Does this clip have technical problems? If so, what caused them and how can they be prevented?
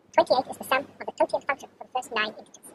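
Yes. The speech throughout has the audio read two samples at a time (double speed) fault: it plays twice as fast and a full 12 semitones (an octave) higher. The reader grouped each pair of samples into one frame, likely because it expected two channels or samples twice as wide. What sets this apart from a plain sample-rate mismatch is that every second sample is effectively discarded, so strong content above a quarter of the sample rate folds back. To prevent it, make the reader's channel count and sample format match the stream's actual layout.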